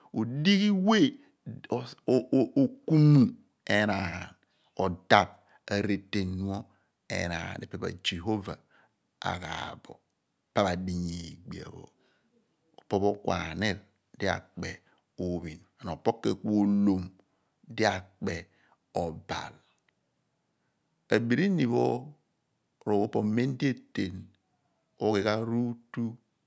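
Nothing faulty can be heard anywhere in this speech.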